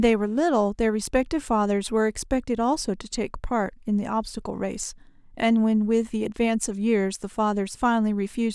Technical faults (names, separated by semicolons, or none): none